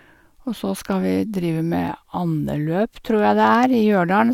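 No technical faults occur anywhere in the speech, so there is nothing to describe in time order.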